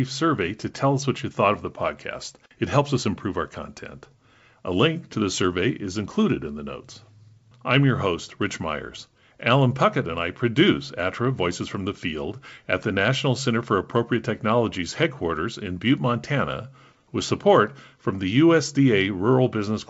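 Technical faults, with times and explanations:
No technical faults found; the speech runs over G.722 wideband telephone coding at 64 kbit/s, reaching about 7 kHz, with any trace of the coding faint at most.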